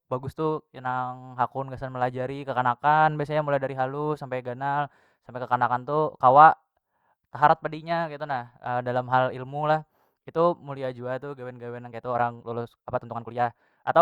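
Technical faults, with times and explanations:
11.8–14.02 s, time-stretched section: the final stretch runs about 1.35 times faster than the rest while pitch holds steady, so the pace jumps abruptly and sounds rushed. Likely cause: software squeezing this part to fit a length by dropping short pieces.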